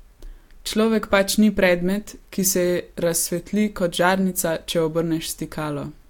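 A recording of speech with no technical fault to report. Nothing in the audio calls for a time or a cause.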